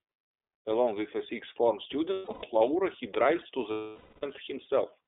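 The whole clip runs through the iLBC codec, so it's squeezed into a narrow phone band of roughly 300 Hz to 3.6 kHz, with the top end gone and the low end thin. The codec damage is plainly audible: speech stays clear but picks up that rough, slightly synthetic edge from coding each frame's excitation on its own. The framing and bitrate fit iLBC's 30 ms mode at around 13.33 kbps.

From 2.13 to 2.44 s there are lost iLBC frames, about 270 ms missing in total, scattered over those 300 ms rather than in one block, with the longest run around 150 ms. The decoder fills each hole by repeating the last pitch cycle with some noise mixed in, so you hear short held, buzzy vowel fragments stitched between real audio. Because iLBC frames don't depend on each other, it snaps back almost straight away after each gap.

From 3.71 to 4.24 s comes a longer loss of 510 ms. Here the concealment holds that repeated pitch cycle much longer, sounding like a sustained breathy, buzzy vowel that fades as the loss drags on. 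Once packets return at 4.24 s, the sound recovers almost immediately.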